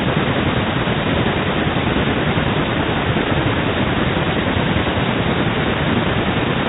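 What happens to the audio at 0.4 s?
Nothing goes wrong at 0.4 s: the speech is intact there, carried through the 32 kbit/s G.726 ADPCM path as normal.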